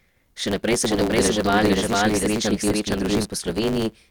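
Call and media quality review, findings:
Block size mismatch (truncated), whole clip: steady 109 Hz buzz, speech running 1.16x fast at roughly normal pitch. Block-buffer stage drops each block's tail; fits 512-sample writes read as shorter blocks.

Doubled audio track, 0.86 s to 3.25 s: full-band copy of the speech about half a second behind, at roughly equal level, dry, abrupt on and off. Likely a second, slower capture path mixed in.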